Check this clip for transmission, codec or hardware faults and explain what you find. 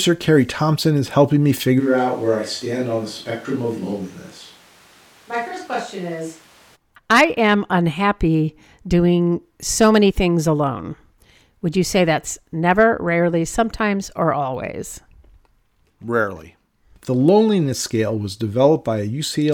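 One fault: a switch to a distant microphone from 1.81 to 6.74 s, between "is helping me" and "I am unhappy doing". The speech abruptly turns roomy and thin, about 5 dB quieter, with room noise rising to roughly 25 dB below it. This is likely a fallback to a farther pickup. Unlike a plain level drop or EQ change, the reverberation and noise arrive and leave together at hard edges.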